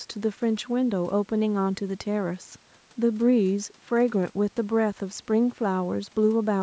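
Speech, with no technical faults to report.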